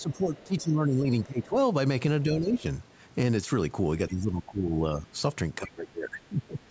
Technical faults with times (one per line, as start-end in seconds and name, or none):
0.00-0.63 other side's voice leaking through
0.00-1.56 speech suppressed in double talk
2.24-2.65 speech suppressed in double talk
2.56-2.62 other side's voice leaking through
4.09-5.15 speech suppressed in double talk
5.58-6.71 speech suppressed in double talk
5.66-5.71 other side's voice leaking through